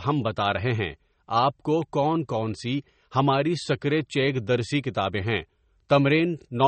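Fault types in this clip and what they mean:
MP3 compression: Likely a low-bitrate MP3 encode, consistent with about 32 kbps, where the encoder zeroed weak frequency lines and cut the top band. Plainly audible watery, swirling artefacts run through the whole speech clip, with nothing above 8.4 kHz.
electrical switching spike: Likely a nearby switch or discharge arcing briefly, with the audio line picking up the burst. A sharp snap sits on top of the speech at 1.82 s, between "رہے ہیں آپ کو" and "کون کون".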